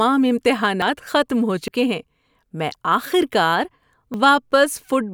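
At 0.82 s, just before "ختم ہو", the speech jumps forward, skipping around 70 ms. Shorter skips of about 40 ms follow at 1.68 s, right after "ختم ہو", and at 4.14 s, after "میں آخر کار". Each is likely a dropped buffer (overrun), where the capture side lost samples before collecting them. Unlike a dropout, no gap of silence appears. The two sides butt together, so the sound lurches ahead.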